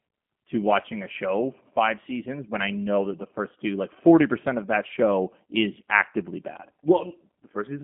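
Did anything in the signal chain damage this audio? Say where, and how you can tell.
Yes, at the codec stage: the speech was squeezed through a G.729 codec, which fits an 8 kbit/s stream. Nothing survives above 3.5 kHz, and a narrow phone band remains. The speech is rebuilt from a filter model and sparse pulses, giving a plainly rough, synthetic edge throughout.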